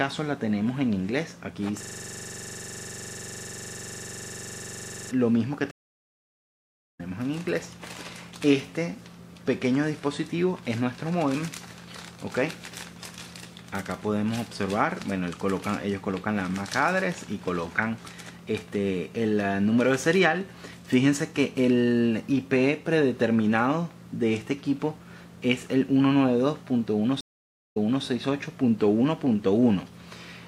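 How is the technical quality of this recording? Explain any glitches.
The recording has three clear glitches: one hang-induced loop and two dropouts from a stream reconnecting.

A system hang loop runs from 1.83 to 5.11 s. The computer or audio driver stalled while the sound hardware kept replaying the same block of its ring buffer. A 42.67 ms slice of audio, which fits a 2048-sample buffer, repeats exactly 77 times. Because the slice is so short, it sounds like a steady buzz at about 23.4 Hz rather than a recognisable repeat.

Two stream reconnects follow. In each, the connection dropped, playback went silent, and a new decoder picked up mid-stream. The first runs from 5.71 to 7.01 s. About 1.28 s of silence is followed by audio that resumes roughly a second further on, so material is skipped. The second runs from 27.21 to 28.04 s. A 0.55 s gap is followed by audio that restarts 287 ms earlier, so a short stretch is heard twice. 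Both re-entries fade in as the new decoder starts.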